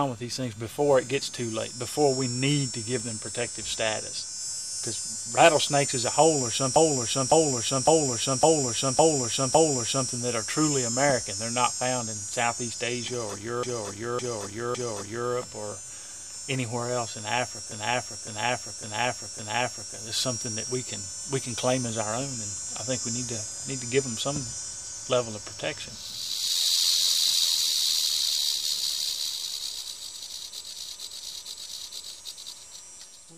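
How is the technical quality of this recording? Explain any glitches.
The recording has one recurring fault, repeated frames, at 6.76–10.10 s, 13.63–15.30 s, 17.72–19.95 s and 30.72–32.12 s. A decoded block of about 0.56 s (0.46 s in the last event) replays several times, producing a looping stutter that adds roughly 8.6 s overall.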